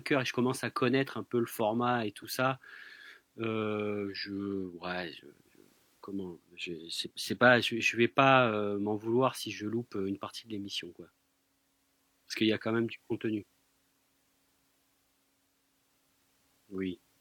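No faults are audible anywhere in the recording.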